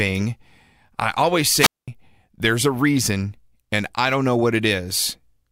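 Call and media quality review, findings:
Wireless mic squelch dropout, 1.55 to 1.88 s in the speech. Hiss swells briefly, then near-silent hole of about 215 ms before the talker comes back. Component: analogue FM wireless link and receiver. RF signal faded enough that the receiver's squelch gate shut the output, leaving the muted gap; rising static right before is the carrier weakening. Worth checking antenna placement, range and body blocking for that pack.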